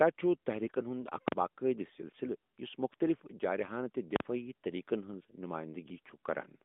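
At 1.28 s and again at 4.16 s, invalid numbers at full scale break in: a calculation went infinite or invalid, pinning the output at maximum for about 43 ms. Each is heard as a loud pop, a gap, then another pop. That block length fits a 2048-sample buffer.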